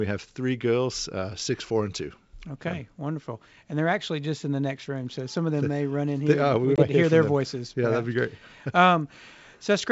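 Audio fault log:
6.76–6.84 s, packet loss on an ADPCM call: A 20 ms hole of sharp-edged silence opens at 6.76 s, consistent with roughly one lost packet. When the speech resumes, the wideband G.722 decoder's adaptive predictor and step size no longer match the sender's, so the returning sound carries brief, slight distortion until the decoder re-converges around 6.84 s. That mistracking tail is what distinguishes it from a simple dropout, which would resume cleanly.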